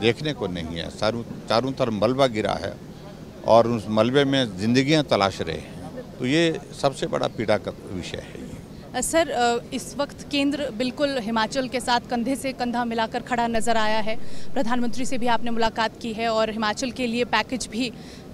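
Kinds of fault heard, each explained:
DC step: A low thump at 13.55 s, and another as it returns at 15.67 s, while the sound itself carries on unchanged. The waveform's zero line jumps by about -22 dBFS, as when an offset input is switched in, holds, then steps back.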